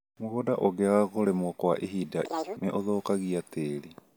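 Audio read two samples at a time (double speed), from 2.26 to 2.57 s: the reader treats each pair of samples as one frame, so the speech races at twice its speed and jumps an octave higher.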